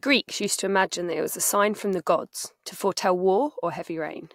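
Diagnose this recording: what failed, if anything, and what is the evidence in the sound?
Nothing in this recording failed.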